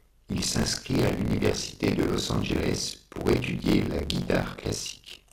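Right from the start there's buffer tearing. The writer and the hardware reader have slipped, so roughly two fifths of every period replays audio from about 40 ms earlier, with hard joins either side. That gives a steady 50 Hz robotic rattle whenever there's speech. From 0.49 to 1.11 s, just before "l'université de", DAB burbling kicks in: bit errors sneak past correction into the MP2 data, so single sub-bands jump for a frame. It's a muddy bubbling with chirps. It returns from 4.24 to 4.46 s, right after "pour étudier la".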